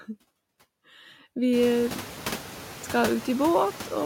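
Throughout the speech, noise suppressor artifacts are present: bands judged steady noise are lowered by only about 4 dB, so the residue pumps gently rather than cutting to silence like a gate. This is clearest after the room noise jumps by about 24 dB around one and a half seconds.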